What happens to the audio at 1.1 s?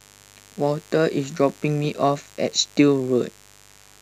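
At 1.1 s the speech sits over a mains buzz that runs for the whole clip rather than starting there. The 50 Hz supply is coupling into the signal chain as sharp spikes, twice per mains cycle, so the interference carries a dense set of 50 Hz harmonics climbing into the kilohertz range. The result is a steady, raspy buzz, not a smooth hum, sitting roughly 30 dB below the speech.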